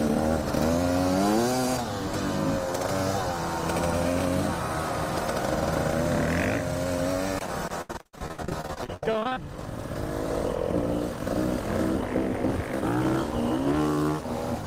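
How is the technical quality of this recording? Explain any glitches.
The recording has one clear glitch. From 7.81 to 9.37 s there is repeated packet loss: audio data kept dropping out, and stretching the previous sound over gaps of up to 77 ms covered about half the span, producing choppy, robotic sound.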